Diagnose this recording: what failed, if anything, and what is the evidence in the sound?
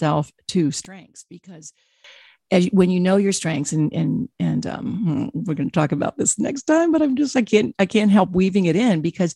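From 0.85 to 2.04 s the speech collapses to a faint ghost, dropping by about 23 dB until it returns just before "as when you know". The likely cause is one channel inverted in the analogue wiring, so the centred content cancels when the channels are summed to mono.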